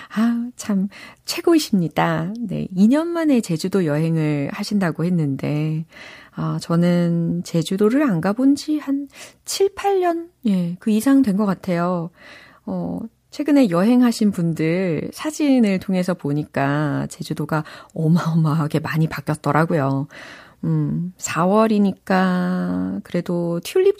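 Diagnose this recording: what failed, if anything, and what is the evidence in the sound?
Nothing in this speech recording points to a failure at any stage of the chain, from capture through playback.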